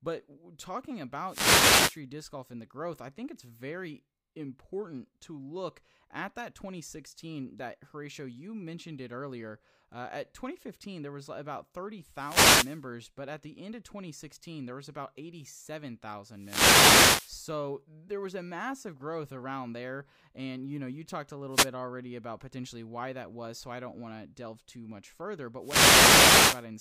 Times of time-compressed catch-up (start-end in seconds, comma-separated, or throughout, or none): none